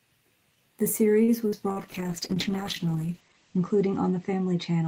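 At 1.23 to 1.31 s there is a short stall from a late packet. The jitter buffer ran empty, so the last sound is held about 48 ms too long. Nothing is lost, but playback falls 48 ms later.

At 1.48 to 1.55 s comes a short concealed packet loss. About 40 ms never arrived. The receiver continued the preceding sound, which makes a brief smear.

From 1.72 s to the end there is a call bitrate drop, from 32 to 10 kbps. Bandwidth falls from 20 kHz to 8 kHz, so the sound turns muffled and rough. It stays at the lowest rate for 1.81 s. At 1.72 to 1.79 s, another 40 ms packet loss is concealed the same way.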